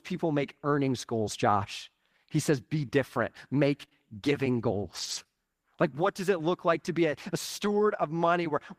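Speech, with two lost packets rebuilt from error correction. At 0.85 s, right after "people make", and again at 7.65 s, after "to be a a", a 20 ms stretch turns briefly rougher and noisier. That fits one lost packet replaced by its low-bitrate in-band copy. On a spectrogram there is no gap, only a thin sliver of grainier, smeared texture. Between 3.81 and 5.27 s come scattered short gaps: about three small holes, the longest around 20 ms, each patched by continuing the preceding sound. They come across as brief ticks or hiccups. In the waveform they show as tiny copied-looking periodic segments or slight discontinuities at the joins.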